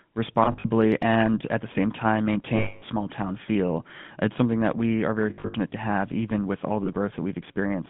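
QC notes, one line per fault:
Throughout: GSM full-rate codec. Speech carries a buzzy, gravelly roughness from the pulse-driven vocal-tract model, with the line band limited to roughly 150 Hz to 3.5 kHz, so the top end is dull. Damage is plainly audible, consistent with a 13 kbps full-rate stream.
0.44–0.67 s: lost GSM frames, before "and at the same". About 120 ms missing, scattered across 200 ms with the longest gap around 70 ms. Each gap is filled by repeating the last good frame's settings, producing short metallic flutters.
2.56–2.83 s: lost GSM frames, between "at the same time" and "small town feel". One continuous gap of about 260 ms. The held frame rings roughly and metallically.
5.30–5.55 s: lost GSM frames, between "that we are very" and "to have even with". About 200 ms lost across 240 ms, longest gap around 70 ms. Repeated-frame concealment gives broken, metallic ringing bursts rather than a clean dropout.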